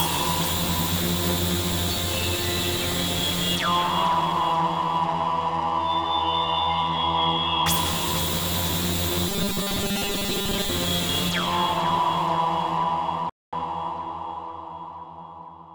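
Robotic sound from repeated short buffers runs from 9.29 to 10.69 s: the audio turns into a rigid, metallic buzz at 200 Hz. The likely cause is fresh audio arriving too seldom, so most of the stretch is filled by looping the last 5 ms.

A rebuffering stall follows at 13.30 s, where playback drops to silence until 13.53 s, then picks up exactly where it stopped. The player ran out of downloaded audio and waited, so nothing is lost but 232 ms is added.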